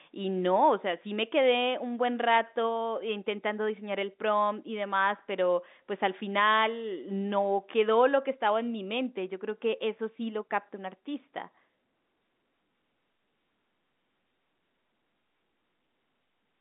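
Nothing goes wrong anywhere in the recording; the speech simply carries the usual narrow telephone character of G.711 A-law coding, sitting roughly between 200 Hz and 3.7 kHz with nothing above about 3.8 kHz.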